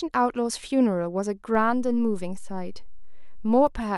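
At 1.55 s a DC step of about -30 dBFS shifts the waveform's zero line, heard as a low thump or click, then ends at 3.67 s; unlike a dropout, the speech continues unbroken.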